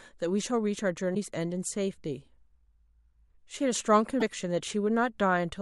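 A likely broken MP3 bit reservoir after dropped frames makes the speech jump ahead with a brief glitch at 1.14–1.17 s and 4.19–4.22 s.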